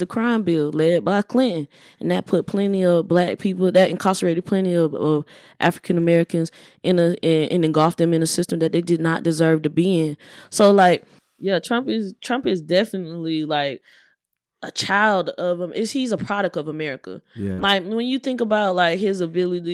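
Speech, with several lost packets rebuilt from error correction and one short concealed packet loss. At 5.99 to 6.05 s, just after "him is he's a" at 16.27 to 16.29 s, and at 17.58 to 17.68 s just before "when you think", the decoder played low-bitrate copies carried in the following packets. The rebuilt stretches are about 40, 20 and 60 ms long, consistent with two, one and three lost packets. Nothing drops out, but those moments sound rougher and noisier. On a spectrogram they appear as brief blurred, grainier patches with softer harmonic detail, while the waveform stays continuous. At 17.53 to 17.60 s, about 40 ms arrived too late to use. The receiver filled it with roughly 43 ms of continued sound extrapolated from what came before and then blended back into the real signal, which is heard as a short smear or wobble. On a spectrogram this shows as a brief stretch of continued, smeared sound across the gap. 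The waveform shows no true silence.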